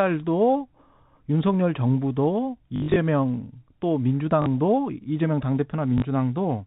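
Packet loss with last packet repeated hits at 2.76–2.96 s, 4.42–4.46 s and 5.98–6.02 s. Each gap is filled by replaying the last packet, so you get robotic stutters buzzing near 50 Hz, which fits 20 ms packets, over the telephone-band G.711 sound.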